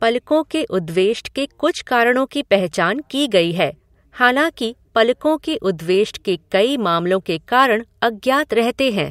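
No technical faults can be heard anywhere in the speech recording; the signal stays continuous and steady throughout.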